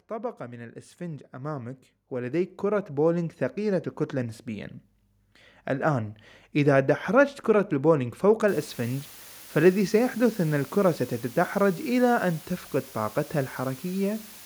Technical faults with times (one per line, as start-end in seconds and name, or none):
0.08-4.78 automatic gain rising
8.48-14.46 low bit depth with dither